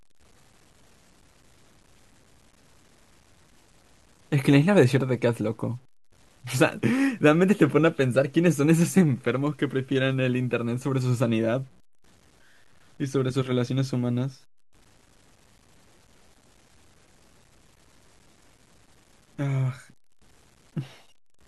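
Throughout the speech, quiet passages turn gritty and the softest tails sputter or drop out, a grainy distortion that moves with the signal, roughly 35 dB down. This is likely low bit depth without dither, fitting truncation to around 9 bits; waveforms show visible stair-steps, spectrograms signal-following hash.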